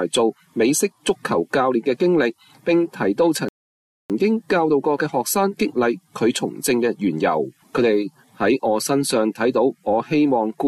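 At 3.49 s the audio cuts to silence and stays silent until 4.10 s, a rebuffering stall that adds about 0.61 s to the clip. The player ran out of downloaded data and simply waited for more before continuing. A network dropout or packet loss would skip part of the sound. Here playback picks up exactly where it halted, with nothing missing, so only timing is disturbed, not content.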